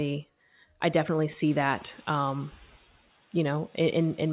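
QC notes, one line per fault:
1.49–2.77 s, noise suppressor catching up: just after "I definitely" the room noise jumps by about 23 dB around one and a half seconds in, and the suppressor's noise estimate still reflects the quieter background. The new noise therefore passes with little reduction at first, then sinks by about 6 dB over 1.28 s as the estimate climbs to the new level. The result is an audible surge of background that then sinks rather than being trimmed at once.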